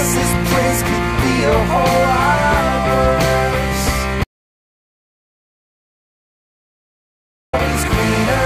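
At 4.24 s the music cuts to silence until 7.53 s, an audio dropout to silence lasting 3.29 s, likely from lost input while recording continued.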